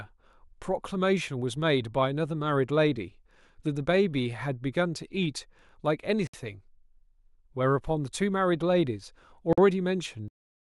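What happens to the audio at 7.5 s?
Nothing goes wrong at 7.5 s; the speech carries on intact through that moment, with no dropout, click or distortion.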